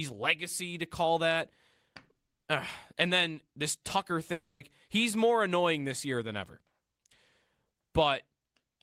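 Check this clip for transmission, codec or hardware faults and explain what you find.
One fault is audible, a long network dropout, likely from packets not arriving. From 4.32 to 4.62 s the speech breaks off. The last sound is stretched into a fading buzz, then about 140 ms of silence follows, and speech resumes with roughly 280 ms missing. On a spectrogram, smeared, decaying bands give way to a blank column; the waveform tapers to a flat line.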